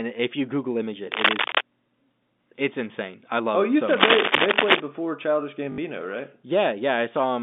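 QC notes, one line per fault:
1.12 to 1.61 s and 3.87 to 4.80 s, cable scratch noise. Dense, uneven bursts of scratching and rustling sit over the speech, a little louder than the speech itself. The first lasts about half a second. The second runs close to a full second. The likely cause is a worn cable, connector or control being moved. Its contact resistance jumps about rapidly, and each jump throws a ragged burst of noise into the signal.
5.72 to 5.78 s, packet loss with last packet repeated. About 60 ms of audio is missing. The stretch was filled by replaying the last good packet until new ones arrived. This fits three lost 20 ms packets. Together they give a brief robotic stutter that buzzes at about 50 Hz. The narrow telephone band of the G.711 line can still be heard around it.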